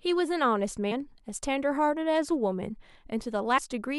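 At 3.57 s the speech jumps ahead about 70 ms: compressed frames skipped, around three 26.1 ms frames missing or rejected.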